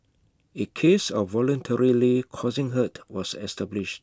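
Speech recording with no audible technical faults.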